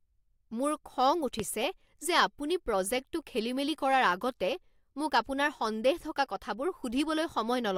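At 1.40 to 1.42 s, just after "মোৰ খং", a single sharp loud pop rises well above the speech, likely a sudden voltage spike from a switch or static.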